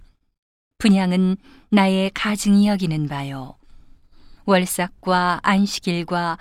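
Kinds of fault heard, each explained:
No technical faults can be heard in this recording.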